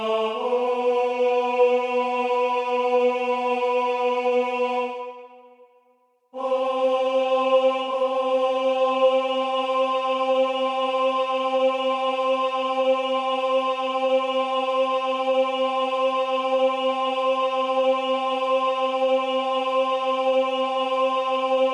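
No technical faults are audible anywhere in the audio.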